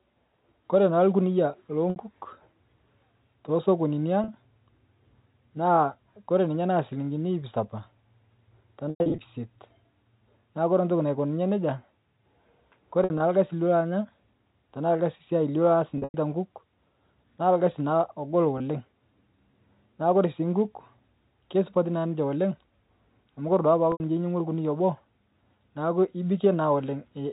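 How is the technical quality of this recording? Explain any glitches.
The speech, carried over G.711 telephone coding with nothing above 4 kHz, has seven dropouts from packet loss with pitch repetition: 1.90–1.96, 4.24–4.28, 8.90–9.18, 13.04–13.20, 15.98–16.14, 18.58–18.60 and 23.92–24.00 s. The receiver bridges each gap by looping the last pitch cycle. Short gaps sound like a brief buzzy hold. On a spectrogram the harmonics go flat, and the waveform shows identical repeated cycles. The longer scattered runs at 8.9 and 16.0 s, with up to 100 ms lost at once, fade toward silence.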